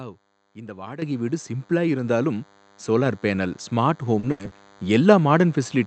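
Running under the whole clip is a DECT cordless phone buzz: a thin, steady buzz at 100 Hz, rich in harmonics and sitting far below the speech. A nearby handset or base station sends radio bursts every 10 ms, and the audio circuitry rectifies them. Unlike mains hum, it is edgy rather than smooth.

At 1.02 s, just before "வீடு சிம்பிளா", the microphone volume is stepped up by 11 dB in one jump. Speech and background rise together, which points to an input-gain change rather than the talker getting louder. It is also instant, where an automatic gain control would ramp gradually.

From 4.19 to 4.26 s, after "பேனல் ஸ்மார்ட்", there is short concealed packet loss. About 40 ms of audio never arrived, and the receiver bridged the gap by extending the preceding sound. The result is a brief smear or wobble, not a silence or a click.

From 4.31 to 4.42 s comes a burst of packet loss. Here about 80 ms is missing, long enough that the concealment is held and fades away. 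It is heard as a sustained buzz or hiss that dies off before speech resumes further along. This is longer than the short smear around it.

From 4.47 to 4.54 s, a second short concealed packet loss fills another 40 ms gap with the same quick, smeared continuation.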